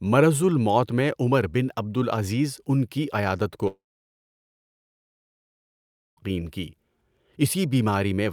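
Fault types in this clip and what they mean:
Long network dropout: At 3.67 s, just after "العزیز ان کی عیادت", the speech cuts off. A short fading buzz trails the last sound, then near silence holds for about 2.4 s. Speech returns at 6.19 s, with 2.5 s lost, likely from packets never arriving.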